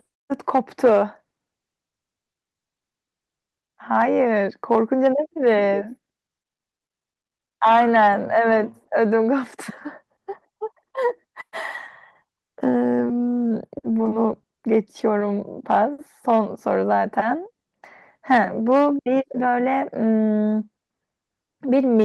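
Speech recording with no audible technical faults anywhere in the signal.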